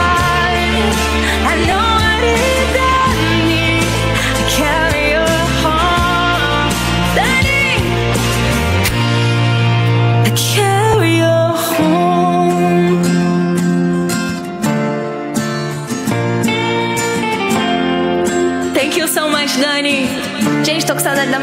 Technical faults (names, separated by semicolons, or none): lost LE Audio frames